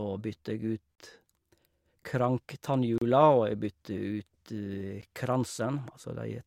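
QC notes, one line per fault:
0.95–0.98 s, 2.98–3.02 s and 5.02 s, gap between stream segments: the speech stops dead for about 28 ms, 33 ms and 13 ms, once per 2-second segment boundary. The segment timestamps leave a small hole, so the player inserts hard-edged silence there, and no audio is lost.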